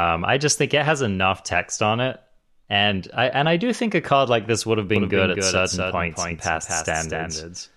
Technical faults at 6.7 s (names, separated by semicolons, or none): doubled audio track